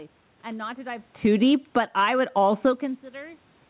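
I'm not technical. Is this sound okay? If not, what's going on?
No. Just after "and not to dive", around 1.1 seconds, the call's automatic gain control judged the input too loud, or its background noise too strong, and turned its volume down over about a second, until roughly 2.1 seconds. The speech and the room noise behind it sink together, so everything sounds as if it has drifted away.

Then, from about 2.0 to 3.5 seconds, the same control turned its volume back up. The automatic gain kept rising because the incoming sound had dropped sharply. The voice and background swell back up together over about a second and a half.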